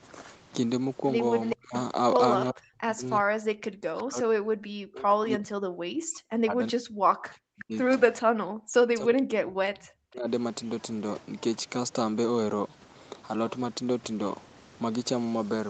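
Echo leak at 1.44 to 1.56 s: a faint delayed copy of the speech, trailing by 373 ms and roughly 10 dB down, likely from a far-end loudspeaker echo the canceller failed to remove.

Speech suppressed in double talk, from 1.53 to 1.75 s, 2.5 to 3.04 s, 3.21 to 7.75 s and 8.2 to 10.29 s: the speech drops by as much as roughly 40 dB. The likely cause is the echo canceller mistaking overlapping talk for echo and attenuating both.

A second, fainter echo leak at 7.59 to 7.64 s has the same 373 ms delay but sits about 20 dB below the speech.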